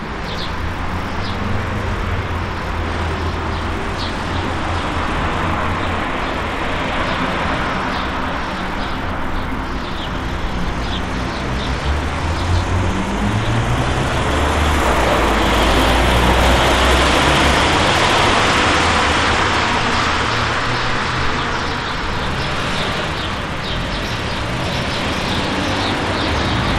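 No technical faults can be heard anywhere in the recording, and the signal stays intact and continuous throughout.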